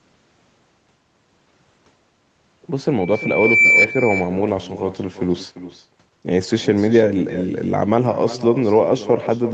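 From the start, the speech has echo with no canceller: every phrase comes back around 400 ms later, about 14 dB down, as a thinner copy. The far end is playing the call over a loudspeaker, its microphone catches that, and nothing subtracts it before it returns to you. The delay matches a network round trip, so you hear a steady shadow trailing the talker through the whole clip.

At 3.00 s a loudspeaker feedback squeal kicks in and runs to 3.87 s. It's a single tone at 2.3 kHz that swells over roughly 0.7 s until it sits around 5 dB above the speech, then it's gone. That's the mic hearing the speaker it feeds, with the loop gain tipping over one at that frequency, so the tone keeps building on itself. The top end stops at 8 kHz, which fits a wideband Opus call at around 32 kbps.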